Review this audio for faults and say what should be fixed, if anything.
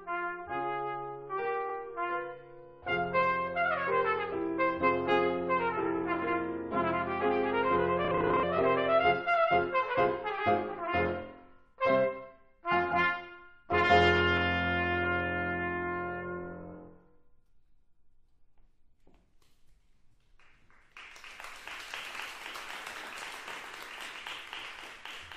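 A brief stutter at 1.68 to 1.73 s, where a 46.4 ms slice of sound plays twice in a row. These are repeated frames: a run of compressed data, which fits two frames, was written or sent twice, so the decoder played it again and the audio grew by 46.4 ms. To prevent it, check the encoding and transport path for duplicated writes or resent packets, and deduplicate frames by sequence number or timestamp before decoding.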